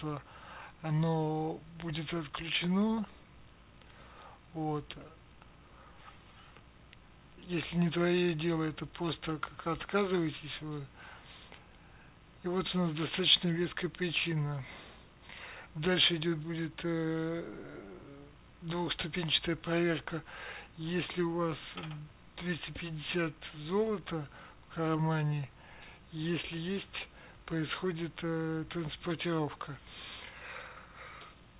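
No technical faults can be heard; the sound reaches the listener through a call path with nothing above 4 kHz, which fits narrowband telephone coding such as 64 kbps G.711 A-law.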